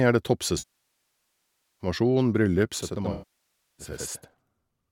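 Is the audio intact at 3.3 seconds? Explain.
No. Two faults overlap at 3.3 seconds. First, channel delay (doubling): from 2.82 s to the end, one channel runs 85.33 ms behind the other, which fits a 4096-sample buffer. When the channels are summed to mono, that late copy arrives as a distinct second hit at equal level, so the speech sounds doubled, with a slap-echo quality trailing each sound.

Second, AAC frame loss with concealment: from 3.12 s to 3.86 s, about 0.66 s of coded audio never reached the decoder, which points to a run of roughly thirty lost frames. The decoder patched the gap by reusing the last good spectrum, and because the loss lasted so long, that substitute decays toward silence before real audio fades back in. At 3.3 s the speech is therefore replaced by that concealment, still carrying the doubling.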